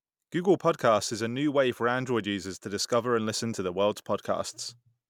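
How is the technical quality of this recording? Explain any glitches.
No glitches can be heard in this speech recording. There are no dropouts, clicks, distortion or other technical faults anywhere in the clip.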